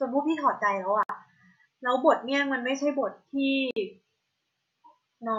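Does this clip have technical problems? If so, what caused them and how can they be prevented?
Yes. Two gaps at a join of encoded pieces, at 1.03–1.09 s (about 60 ms) and 3.71–3.76 s (about 55 ms), leave untrimmed encoder delay and padding as thin blank vertical stripes with smeared edges. Prevent them by encoding as one piece or trimming each piece's delay and padding before joining.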